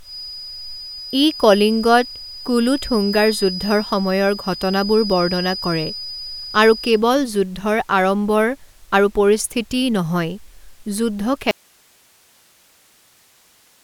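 A speech recording that suffers an audio dropout to a faint residue at 11.51 s, lasting to the end. The signal vanishes abruptly rather than trailing off, leaving only low hiss roughly 35 dB below the speech level. That sudden cut to a live, noisy floor distinguishes it from a natural pause or a fade-out, and from digital silence. It likely comes from a break in the source connection while the input stage stayed open.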